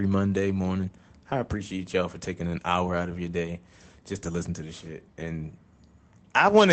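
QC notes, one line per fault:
No faults heard in this speech clip.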